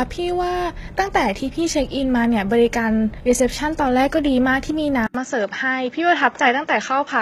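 HE-AAC compression runs throughout, with plainly audible damage. The treble is likely rebuilt by spectral band replication, copying lower bands upward under a coarse envelope, so upper harmonics don't line up with the originals. The artefacts fit HE-AAC v2 at roughly 20 kbps.

Input switched to a poorer device at 5.07 s, lasting to the end. An 80 ms silence marks the switch, after which nothing is heard above 7.6 kHz and new background noise sits about 40 dB below the speech, at much the same level, likely another microphone or a headset profile.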